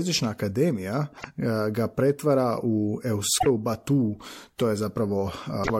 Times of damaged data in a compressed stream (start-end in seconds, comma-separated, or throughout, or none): 1.14-1.25, 3.36-3.47, 5.60-5.70